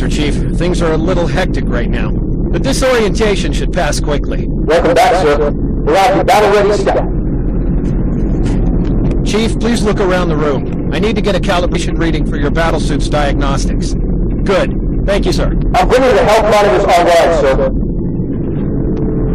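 Compressed frames are skipped at 2.40, 6.89, 8.14, 11.74 and 15.31 s. Missing or damaged frames go unplayed. The audio jumps ahead by roughly 50 to 100 ms.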